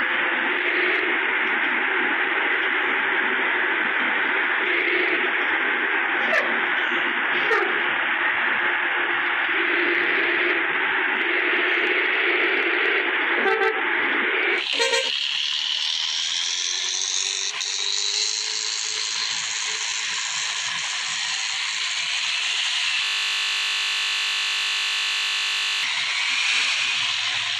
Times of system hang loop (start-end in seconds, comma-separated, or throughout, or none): 23.05-25.83